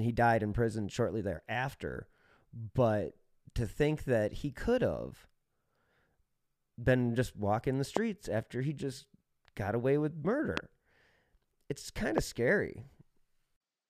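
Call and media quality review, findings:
Loud pop, three single events at 7.97–7.99 s, 10.57–10.60 s and 12.18–12.20 s. Each is a sharp, brief crack about 20 dB above the speech, which continues underneath. Likely cause: a voltage step or pulse entering the chain from a connector, switch, static discharge or driver glitch. Downstream filtering shapes the pulse into a short click lasting about 20 ms.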